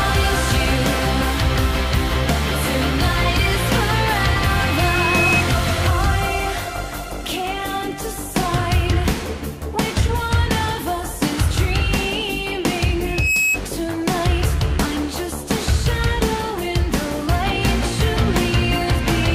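At 4.33 s a loudspeaker feedback squeal starts: a single 2.6 kHz tone swells over about a second and ends at 5.43 s, peaking roughly 5 dB above the rest of the sound. The mic is hearing its own speaker, and at that frequency the loop gain tops unity, so the tone keeps feeding itself. It returns at 13.04 s, builds faster, in about a third of a second, sits level with the sound, and is gone by 13.60 s.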